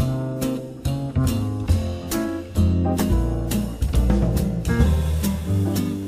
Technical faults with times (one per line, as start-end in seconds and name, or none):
3.09-3.12 compressed frames skipped
5.46-5.49 compressed frames skipped